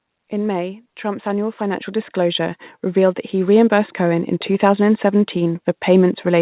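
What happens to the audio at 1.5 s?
At 1.5 s the automatic gain is rising. The gain control judged the input too quiet and kept boosting it from 0.3 s to 4.33 s, about 12 dB overall. Speech and background swell together until just before "two thousand".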